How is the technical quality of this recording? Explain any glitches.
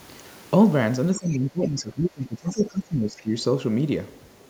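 The recording has two related echo-cancellation faults in the middle of the clip, where both ends of the call seem to be talking at once.

From 1.19 to 3.35 s, the speech is suppressed in double talk. The talker's level sinks unevenly, at its deepest by around 20 dB, and the speech thins and breaks up in patches. The likely cause is an echo canceller that couldn't separate the local talker from loudspeaker echo and turned everything down.

The other side's voice leaks through briefly at 2.57 to 2.64 s and again at 3.16 to 3.22 s. These are short scraps of a second voice sitting well below the main speech, the later one fainter still. They likely come from loudspeaker playback that the echo canceller didn't fully remove from the microphone. Unlike room reverberation, these scraps are a separate voice that is not a tail of the talker's own speech, and they appear only while the suppression is active.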